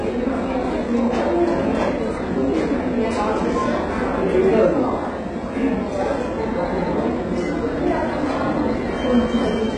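From start to finish, the top end is rebuilt rather than real: gritty, metallic treble that stops at 11 kHz, likely HE-AAC compression heavily squeezed, fitting roughly 12 kbps.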